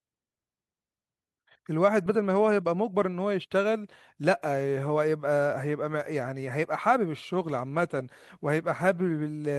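At 7.0 s a call bitrate drop sets in and lasts to about 9.41 s. The sound turns coarser and watery, which fits the encoder being pushed from roughly 64 kbps down to around 27 kbps and held there for most of that stretch, about 2.35 s. On a spectrogram the upper bands thin and smear into blotchy patches. The waveform's envelope is unchanged, so the damage shows in spectral detail, not level.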